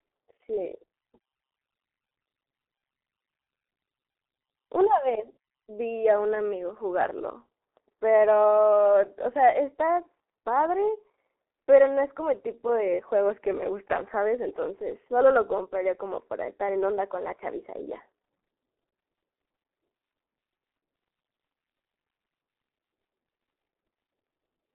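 From start to finish the speech carries heavy G.723.1 codec damage. Nothing survives above about 3.8 kHz, the band sits roughly 300 Hz to 3.4 kHz, and the coarse, slow-updating model leaves it muffled and hoarse with smeared consonants, which fits the 6.3 kbit/s mode.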